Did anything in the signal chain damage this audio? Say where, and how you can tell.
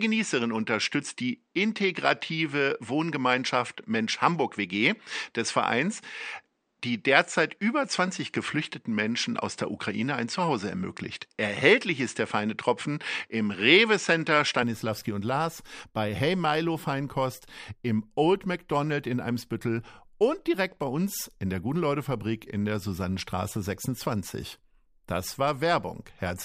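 Yes. From the start to 14.63 s, the speech is dull, with nothing above 9.2 kHz. At 14.63 s it opens up, with no gap, and shifts in level by around 5 dB. The likely cause is an input switched to a poorer device at the capture stage.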